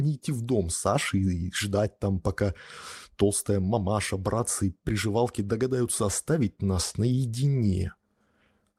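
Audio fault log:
No faults heard anywhere in this speech recording.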